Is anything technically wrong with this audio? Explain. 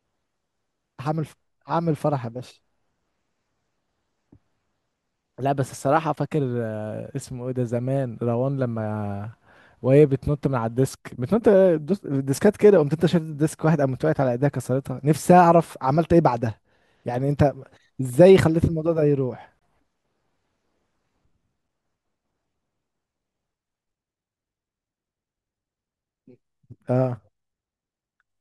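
Yes. At 19.59 to 19.62 s the speech drops into a block of digital silence lasting about 23 ms, which fits a 1024-sample buffer left unfilled in time. The edges are hard, and it is heard as a brief hole; unlike a fade-out dropout, it has no taper.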